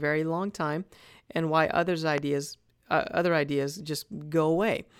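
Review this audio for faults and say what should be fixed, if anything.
A single loud pop at 2.18 to 2.20 s stands well above the speech, peaking about 10 dB over it, while the speech continues underneath. A brief voltage pulse, likely from a plug, switch, static discharge or driver glitch, was added to the signal. Secure connectors, ground the setup and avoid switching equipment during recording.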